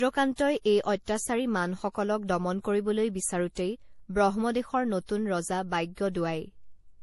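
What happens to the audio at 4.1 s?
At 4.1 s the speech carries the same degradation heard across the whole clip: nothing reaches above 11.5 kHz, and two kinds of coding artefact sit on top of each other. This is likely transcoding between lossy codecs, with an MP3-style encode followed by a Vorbis re-encode at a similarly low rate. The second stage wastes bits reproducing the first stage's artefacts, then adds its own, while the lowest cut-off in the chain, 11.5 kHz, persists.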